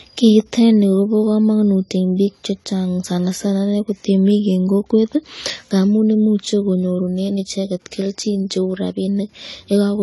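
From start to finish the speech has nothing above about 11.5 kHz, with a dull, smeared top and a watery, fizzy shimmer on sibilants and held vowels. The likely cause is AAC compression with AAC-LC at a low bitrate, around 32 kbps. Too few bits forced the encoder to lower its cut-off and leave gaps in the spectrum. A plain low-pass filter would dull the sound just as much but leave it clean, without this warble.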